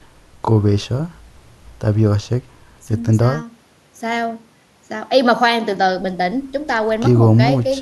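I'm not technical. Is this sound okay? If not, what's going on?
Yes, no faults to hear.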